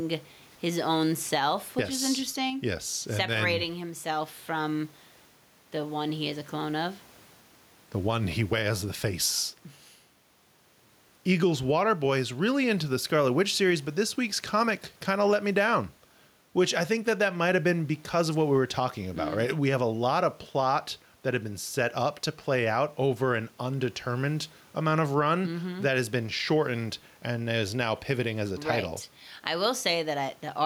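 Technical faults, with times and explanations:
Throughout, gain pumping: the room noise, about 38 dB below the speech, swells in each pause and ducks by roughly 10 dB under loud speech, squashing loud and soft passages together. The likely cause is far too much input gain, with a fast limiter or compressor pulling each peak down.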